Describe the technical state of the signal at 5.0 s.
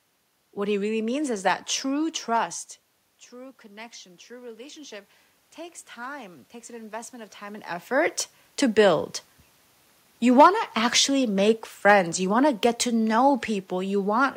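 At 5.0 s the automatic gain control is partway through a slow rise, from 3.29 to 8.21 s. The input had dropped by about 17 dB, so the gain climbs about 8 dB, and the speech and room noise swell up together.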